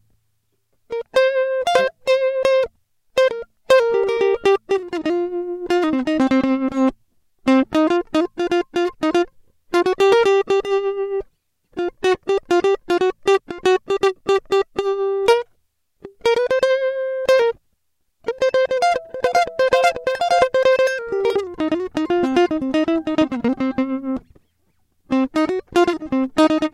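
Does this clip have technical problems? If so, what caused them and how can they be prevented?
No, nothing in this music clip points to a technical fault, so there is no cause to trace and nothing to prevent.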